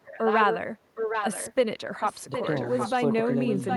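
A delayed second copy of the speech trails the original by about 0.77 s, only a few decibels quieter, in three stretches: 0.03–0.58 s, 0.95–1.54 s and 2.02 s to the end. This echo leak most likely comes from a far end playing the call over a loudspeaker, where the echo canceller failed to remove what its microphone picked up and sent that pickup back down the line.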